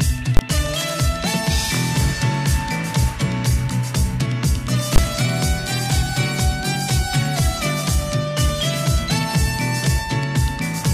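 Two sharp bangs punch through the sound, at 0.37 to 0.39 s and 4.96 to 4.98 s. Each is a 20 ms block of invalid numbers at full scale, where a calculation blew up to infinite or invalid values that got pinned to maximum level. With blocks that short, each lands as one loud crack rather than separate pops.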